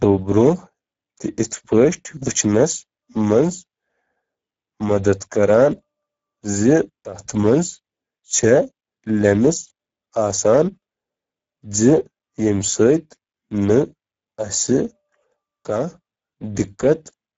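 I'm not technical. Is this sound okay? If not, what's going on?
No. Throughout the clip the speech sounds hoarse and grainy, and a bit dull, with nothing above 7.6 kHz. This is Speex codec damage: an older internet-call compression squeezed the speech into too little data, losing detail and smoothness.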